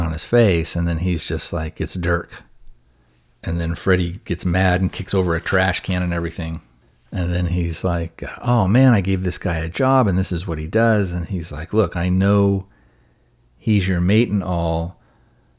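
Listening to the speech recording, nothing technical stood out at any point.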